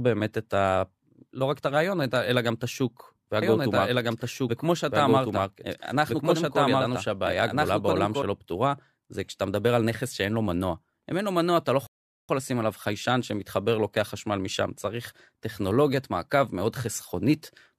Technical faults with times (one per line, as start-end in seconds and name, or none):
2.16 dropped samples
3.42-8.22 doubled audio track
5.29 dropped samples
11.87-12.29 rebuffering stall
13.21 dropped samples